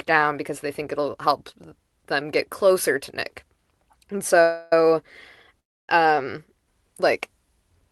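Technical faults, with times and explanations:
4.42–4.73 s and 5.60–5.89 s, call audio freeze: packets were likely delayed and the jitter buffer emptied, inserting about 0.3 s each, a fading fill, then near-silence before "um like", with nothing lost.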